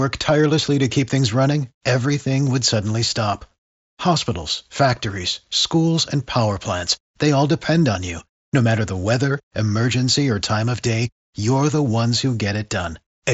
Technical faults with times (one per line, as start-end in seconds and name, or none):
none